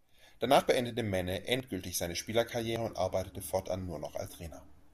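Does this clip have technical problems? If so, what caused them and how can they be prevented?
Yes. The capture software likely failed to read its input buffers before the hardware overwrote them, causing a dropped buffer (overrun). About 40 ms of speech vanishes at 0.6, 1.6 and 2.76 s, and about 100 ms at 4.28 s, each heard as a jump where the sound skips ahead. Larger input buffers and a higher-priority capture thread would prevent it.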